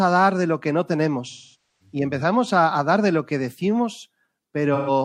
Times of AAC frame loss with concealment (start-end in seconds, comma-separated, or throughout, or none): 1.29-1.95, 4.74-4.90